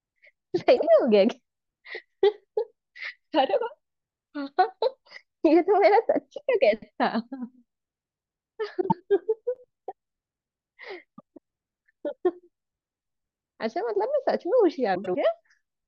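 It's a speech clip with four short spots of frames out of order, at 0.76 to 0.88 s, 8.80 to 9.01 s, 11.18 to 11.38 s and 14.95 to 15.16 s. In each, two adjacent chunks swapped places, about 48 ms each in the first and 96 ms in the rest, so that stretch plays back to front in halves. You get a garbled flutter, though nothing goes missing.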